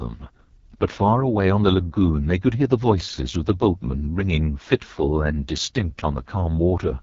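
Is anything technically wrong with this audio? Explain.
Yes. AMR wideband (HD Voice) coding runs through the whole clip. The codec models the vocal tract and drives it with coded pulses below 6.4 kHz, then fills the band up to about 7 kHz with shaped noise, so nothing remains above roughly 7.3 kHz. The damage here is heavy: the speech sounds rough and raspy, with a buzzy, grainy texture, which points to the lowest AMR-WB rate, around 6.6 kbit/s.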